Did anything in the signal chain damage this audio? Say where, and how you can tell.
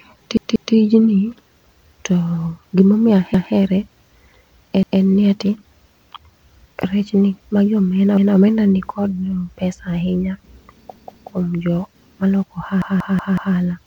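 Yes. The damage is at the driver or buffer stage: a repeated buffer fault, where late data made the device replay its last block. The same roughly 186 ms fragment stutters at 0.37–0.74, 3.34–3.53, 4.83–5.02, 8.17–8.36 (after "rech ni magi omena"), 10.96–11.33 and 12.82–13.56 s, repeating up to four extra times, which fits an 8192-sample buffer. A spectrogram shows identical blocks tiled side by side, and the waveform shows hard vertical joins at each repeat.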